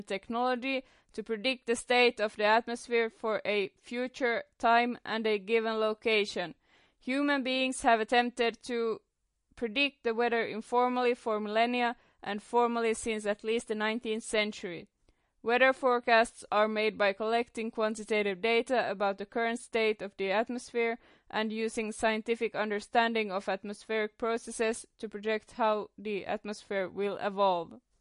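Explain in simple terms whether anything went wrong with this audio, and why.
Something did go wrong, and it lasts through the whole recording. The speech has a watery, swirling quality, and s sounds come out metallic. Nothing can be heard above about 10.6 kHz, so the crisp top end is missing. This is most likely MP3 compression squeezed too hard. To save space, the encoder cut off the highest sounds and dropped quieter details. Those details flicker in and out, and that flicker causes the swirl.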